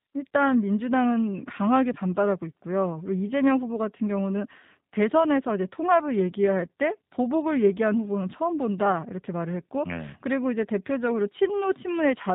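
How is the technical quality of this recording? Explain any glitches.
The speech is clearly coded with plainly audible damage from start to finish. Throughout, the G.729 codec rebuilds speech from a vocal tract model and sparse pulses, consistent with 8 kbit/s, leaving it rough and synthetic. A plain low-pass filter would only sound dull, without this buzzy texture.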